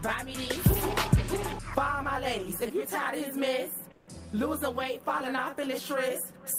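From 3.91 to 4.03 s, comfort noise takes the place of the background for about 120 ms. The real background gives way to a steady, featureless hiss, about 11 dB quieter. The sender likely paused transmission under Opus DTX, and the receiver filled the gap.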